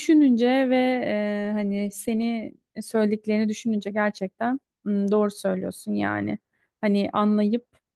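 No technical faults can be heard anywhere in the recording, and the signal stays continuous and steady throughout.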